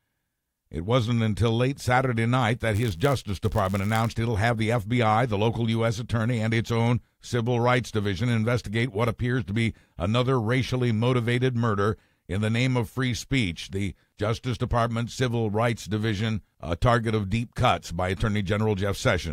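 Speech, with a buzz near 99.6 Hz from 2.74 to 4.14 s, slightly slowed at normal pitch: a block size mismatch (padded), zero-filled gaps in every block.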